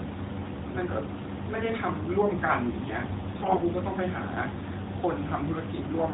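From 3.38 to 3.63 s the speech turns hoarse, scratchy and gargly. These are AMR bit errors, with roughly 7 percent of the lightly protected bits arriving flipped.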